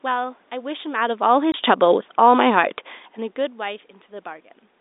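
From 0.99 s to 2.88 s there's automatic gain falling: the gain control decided the input was too loud or too noisy and eased its gain down by about 4 dB, so the speech and the room noise behind it sink together rather than the talker just drifting.

Right in the middle of that, from 1.52 s to 1.54 s, there's packet loss filled with silence. A 20 ms hole with hard edges cuts into the speech, which fits a single lost packet, and the receiver played dead air instead.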